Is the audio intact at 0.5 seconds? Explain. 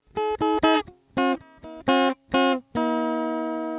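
Yes, the sound is intact at 0.5 seconds; it comes through the WebRTC call path as that narrowband route normally passes it, with nothing above 4 kHz.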